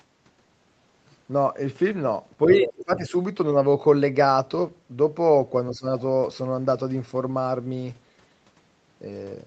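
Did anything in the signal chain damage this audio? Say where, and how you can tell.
Yes. The damage is in the call processing, at the echo canceller. The speech is suppressed in double talk twice. From 2.46 to 3.13 s the level drops in pieces, by roughly 25 dB at worst, for about half a second in total. At 5.71 to 5.86 s it dips again, by about 15 dB. The likely cause is another talker overlapping. The canceller cannot tell the near talker from the loudspeaker echo, so it attenuates both.

The other side's voice is leaking through from 2.51 to 2.84 s. A second voice sits only about 5 dB below the main talker, overlapping the first dip. This is likely residual echo. The far end plays on a loudspeaker, and the canceller fails to subtract all of it from the microphone. The top end stops near 8 kHz, which fits a wideband Opus call path and is not part of the fault.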